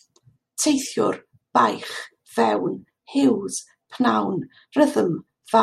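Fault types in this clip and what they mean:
Listening closely to the speech, nothing stood out as a fault of any kind.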